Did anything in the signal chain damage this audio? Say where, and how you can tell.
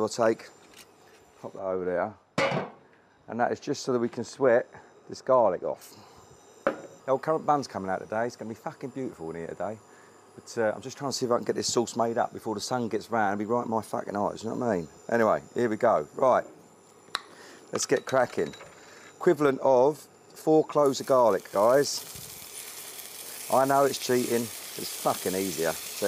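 Yes. A de-emphasis filter was wrongly applied between 1.59 and 5.82 s, most plausibly in the processing or playback stage, where a treble cut meant to reverse pre-emphasis hit audio that either never had that boost or had already been corrected. The high end falls away on a smooth slope, reaching about 14 dB down at 10 kHz relative to 1 kHz, so that stretch sounds dull and muffled.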